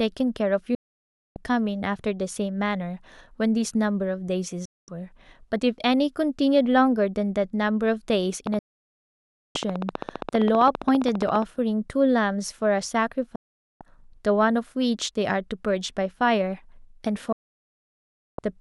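At 0.75 s the receiver stops getting decodable frames and mutes the output. This is a digital broadcast dropout. The speech cuts to silence over about 3 ms and stays gone until 1.37 s, about 0.61 s of programme lost. A shorter hole of 0.22 s follows at 4.65 to 4.89 s. The missing stretches fall in whole steps that point to frames of about 32 ms each.

From 8.47 to 11.43 s a train of clicks runs over the audio, likely from interference or a struggling interface injecting pulses. They arrive at a regular 14.9 per second, roughly fifty ticks of much the same shape, peaking around 10 dB above the speech. Within that span a third dropout mutes the speech from 8.59 to 9.56 s, about 0.96 s. Two more dropouts with the same abrupt mute follow at 13.36 to 13.81 s and 17.32 to 18.39 s, the last the longest at about 1.06 s.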